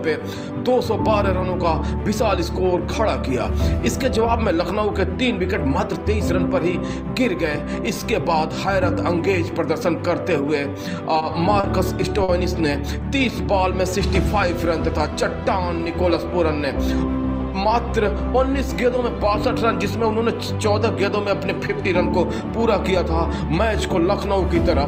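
Three packets arrived late, so the jitter buffer ran empty and the last sound was stretched until each came in. These short stalls from late packets hold the sound for 20 ms at 11.18 s, 30 ms at 11.60 s and 50 ms at 12.23 s, then resume without loss.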